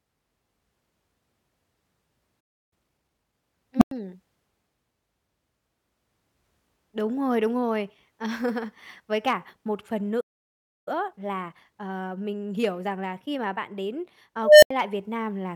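At 2.40 s the speech stops for 0.31 s, a playback stall, likely the player running short of data or being blocked. From 2.73 to 3.35 s, time-compressed catch-up hurries the speech at 1.5x speed with pitch unchanged. At 3.77 s an unstable filter, a recursive filter whose output runs away, swells a tone of around 200 Hz over 40 ms, overflows, and leaves 100 ms of silence. After "cả một phần", a second stall silences the audio from 10.20 s for 0.66 s, followed by 1.1x catch-up from 10.88 to 13.88 s. At 14.44 s the same filter fault grows a tone of around 700 Hz over 185 ms, then cuts out for 80 ms.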